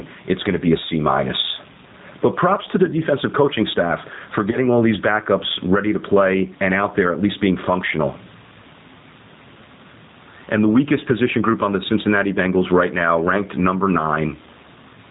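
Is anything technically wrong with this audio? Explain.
Yes, three faults are audible.

Gain pumping runs throughout. The input gain was likely set far too high, so a fast limiter pulls the level down on every loud syllable. The room noise sits about 38 dB below the speech, and the gain swings by roughly 15 dB.

G.729 codec damage is plainly audible across the whole clip, which fits an 8 kbit/s G.729A stream. The codec rebuilds speech from a vocal tract filter, pitch prediction and a few pulses per frame, discarding everything above 4 kHz, so the speech sounds band-limited, rough and slightly synthetic.

VoIP packet loss concealed by the speech codec occurs from 4.51 to 4.57 s, between "defensive coaching staff for" and "all these backups ready". The gap fits one lost 10 ms frame. The decoder extrapolated from its previous pitch and filter at falling gain, producing a brief fading stretch of sound, and the voice stays weak for a short while after the stream recovers.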